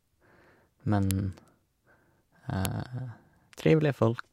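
Separate WAV segments of this speech were joined without their headers being stripped, so a file header played as audio at 1.11 s and again at 2.65 s. Those few dozen bytes are read as samples, each producing a sharp, loud click regardless of the speech around it.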